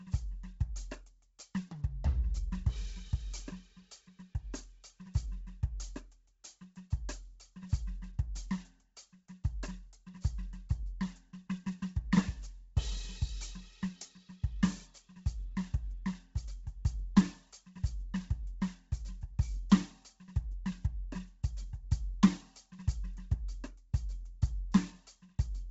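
From start to finish the music has nothing above 7.8 kHz, and its upper range sounds grainy and noise-filled, giving sustained tones a breathy edge. This points to likely Bluetooth LC3 compression at a very low bitrate, around 16 kbps, discarding high spectrum and substituting noise.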